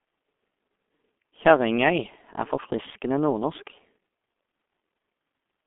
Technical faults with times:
0.00-5.67 G.723.1 codec

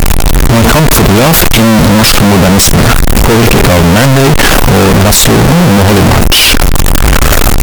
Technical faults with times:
0.00-7.62 float read as integer

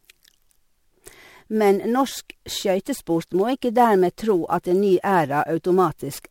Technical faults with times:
0.00-6.30 sample clock jitter

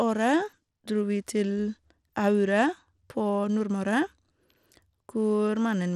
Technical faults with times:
0.00-5.95 Bluetooth SBC compression

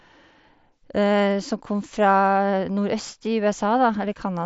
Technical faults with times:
none

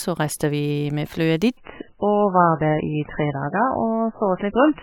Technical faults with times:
1.57-4.82 adaptive stream at a lower bitrate

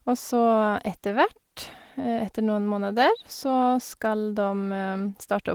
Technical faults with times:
none

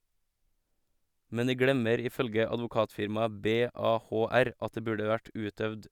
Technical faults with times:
2.82-5.09 sample clock jitter

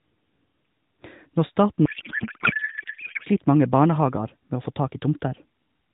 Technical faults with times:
1.86-3.27 codec payload misread

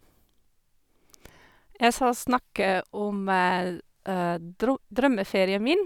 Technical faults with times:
none

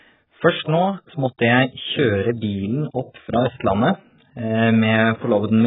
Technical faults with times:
0.00-5.66 AAC compression

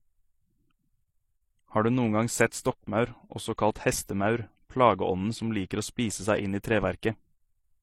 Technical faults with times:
0.00-7.82 transcoding between lossy codecs

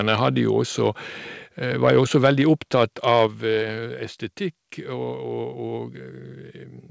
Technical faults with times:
0.08-0.28 microphone overload
0.85-0.88 microphone overload
1.83-2.30 microphone overload
2.26 microphone volume stepped down
2.75-3.26 microphone overload
3.27 microphone volume stepped down

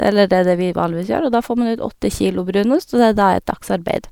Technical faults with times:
none

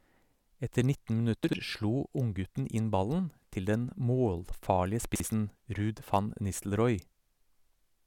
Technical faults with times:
1.44-1.53 chunks out of order
5.15-5.25 chunks out of order

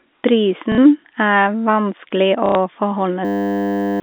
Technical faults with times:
0.72-0.78 packet loss with last packet repeated
2.46-2.55 packet loss with last packet repeated
3.25-4.00 system hang loop

